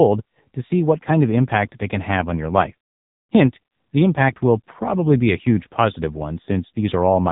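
From start to finish the speech carries AMR narrowband mobile codec damage. Nothing above 3.8 kHz survives, and heavy coding, fitting about 6.7 kbps, makes the voice buzzy and synthetic.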